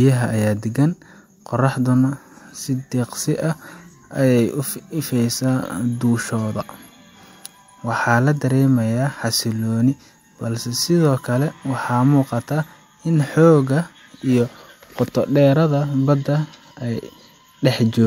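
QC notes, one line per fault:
Nothing stood out on listening to this speech clip.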